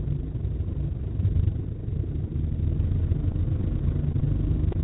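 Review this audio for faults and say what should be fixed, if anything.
From 3.32 to 4.25 s there is repeated packet loss with a robotic sound. Five short holes, the longest 18 ms, were patched by continuing the preceding sound, covering about 8% of that stretch. Because the holes recur, the result is choppy and mechanical rather than a single blip.

At 4.72 to 4.76 s, a short concealed packet loss leaves one isolated smear. About 20 ms went missing and was filled with extended sound before blending back. Unlike the earlier stretch, it is a lone wobble with no repeating chop.

Both faults sit on a narrowband path that has nothing above 4 kHz, which fits G.711 mu-law. A deeper jitter buffer, along with forward error correction or redundancy on an unreliable network, would prevent these gaps.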